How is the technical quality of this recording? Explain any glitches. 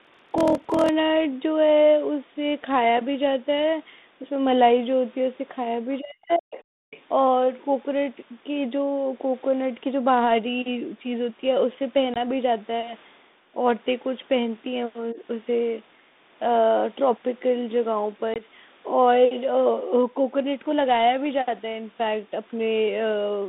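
The recording has several distinct glitches, all heard against narrow telephone-band speech from G.726 at 32 kbit/s, which passes roughly 200 Hz to 3.7 kHz.

Block size mismatch (padded), 0 to 0.9 s: Short blocks are padded with silence, which fits 1024-sample blocks. This produces a steady 41.7 Hz buzz and slows the sound to 0.889 of its normal speed at about normal pitch. Unlike packet loss, the gaps are regular rather than isolated.

Speech suppressed in double talk, 6.0 to 6.58 s and 15.13 to 15.19 s: The talker's own voice dips, by about 40 dB in the first case and about 10 dB in the second. This is likely an echo canceller ducking both voices while two people spoke at once.

Other side's voice leaking through, at 6.33 s, 6.56 to 6.63 s, and 6.91 to 7.01 s: Faint scraps of a second voice surface, about 35 and 25 dB below the talker. This is likely residual loudspeaker echo that the canceller missed.

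Background gated by the echo canceller, 6.86 to 6.91 s: The room sound itself drops by about 40 dB for roughly 50 ms, then returns. Unlike double-talk suppression, it is the background, not the voice, that vanishes.

Packet loss on an ADPCM call, 12.14 to 12.17 s and 18.34 to 18.42 s: Each event is a hard-edged 20 ms hole. The ADPCM decoder's predictor then needs a moment to resynchronise, leaving the speech slightly distorted for a moment.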